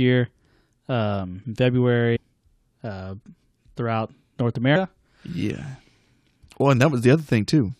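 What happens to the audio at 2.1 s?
A jump at 2.15 to 2.17 s as the speech lurches ahead: compressed frames skipped, dropping about seven 23.2 ms frames, roughly a fifth of a second of audio.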